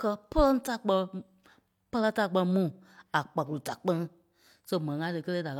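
Nothing technical goes wrong anywhere in this stretch of speech, so there's no fault to point to.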